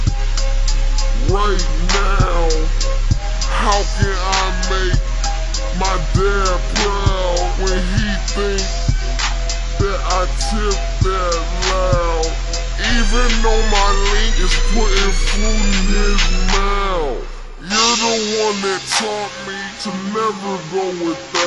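The audio runs slow and low throughout, a wrong sample rate fault: it plays at about 0.73 times its proper speed, with pitch dropped roughly 5.5 semitones in lockstep. The shared ratio fits material recorded at 44.1 kHz being played back at 32 kHz without conversion.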